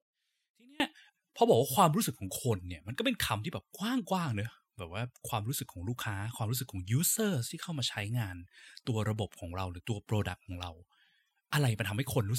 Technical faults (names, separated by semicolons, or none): one channel inverted